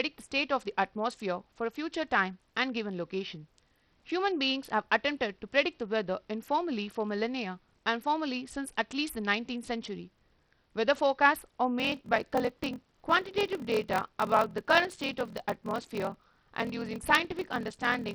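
Speech throughout has dull, flickering treble with gritty noise riding on it, likely from heavy Bluetooth SBC compression at a very low bitrate around 64 kbps. From 11.78 s to the end, a 41.7 Hz buzz appears and delivery slows to 0.889 times normal speed with unchanged timbre, a block size mismatch (padded) that fits 1024-sample blocks being zero-filled.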